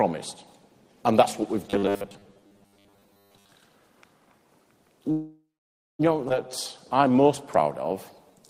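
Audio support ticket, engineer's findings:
Robotic sound from repeated short buffers, 1.7 to 3.55 s. Rigid metallic 100 Hz buzz over the sound, which fits a 10 ms block replayed over and over. Most of this stretch is repeats, with the real audio between them skipped. Receiver likely starved of input.

Call audio freeze, 5.11 to 6.01 s. Last sound is held and decays, then 550 ms of silence. Jitter buffer ran dry, likely from packets stalled in transit. Playback resumes where it stopped, nothing lost, 878 ms of delay added.

Skip ahead, 6.29 to 6.32 s. Abrupt forward jump with only a 6 ms fill at the join. About 0.7 s of audio dropped, either in transit or by the jitter buffer discarding on overflow, which cancels roughly that much of the delay built up at the freeze.

Jitter buffer slow-down, 6.96 to 8.41 s. Sound drawn out, playing at 93% speed with pitch unchanged. Receiver repeats single pitch periods and pause fragments to rebuild its reserve after the skip, adding 104 ms in total.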